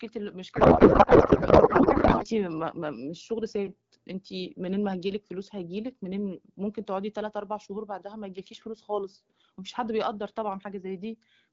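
From 0.56 to 2.25 s there is a codec payload misread. The receiving side unpacks the AMR-WB frames with the wrong bit layout. The sound fits octet-aligned packets being parsed as bandwidth-efficient ones, so every field lands in the wrong place. The decoder still treats each frame as valid, and the speech is replaced by garbled noise and warbling that barely tracks it. Clean speech returns once both ends agree on the packing again.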